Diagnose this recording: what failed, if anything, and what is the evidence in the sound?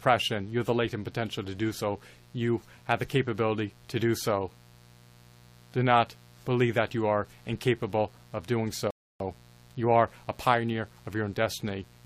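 Analogue wiring: a steady, raspy mains buzz runs throughout, roughly 30 dB under the speech, built from 60 Hz harmonics of twice-per-cycle switching spikes.

Playback buffer: a rebuffering stall after "are incapable of doing" drops to silence from 8.91 to 9.20 s, then resumes seamlessly, adding 0.30 s without losing audio.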